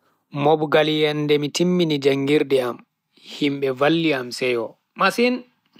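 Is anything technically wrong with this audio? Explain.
No, nothing is technically wrong with this audio.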